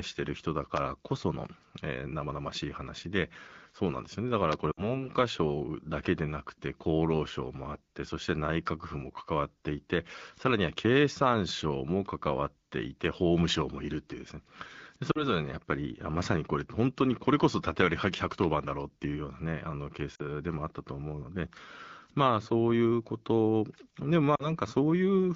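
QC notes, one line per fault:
0.77–0.79 s, loud pop: a single sharp pop about 20 dB above the speech, likely from a plug, switch or static voltage step added to the signal.
4.71–5.06, 15.11–15.28, 20.15–20.21 and 24.36–24.50 s, lost AMR speech frames: gaps of 60 ms at 4.71 s and 40 ms at the others, which fits runs of 20 ms frames failing their checks. The AMR-WB decoder, running cleanly at 12.65 kbit/s, stretches the last good frame with falling gain, so the speech drops to near silence before coming back briefly rough.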